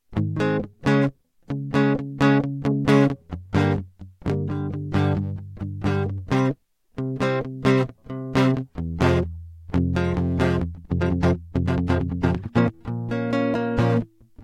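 A music clip with a time-stretched section from 10.66 to 12.74 s, where the pace abruptly doubles to 2.0x while pitch holds, sounding rushed. On a spectrogram, harmonics stay level as events crowd together, with small splice seams; this is likely software dropping short pieces to shorten the passage.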